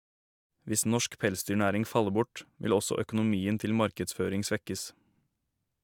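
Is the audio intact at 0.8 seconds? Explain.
Yes, the audio is intact at 0.80 s, with no fault at that moment.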